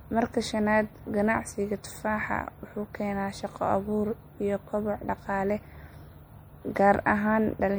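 Throughout, watery swirl and smeared s sounds suggest likely MP3 compression near 64 kbps; a spectrogram shows flickering speckle.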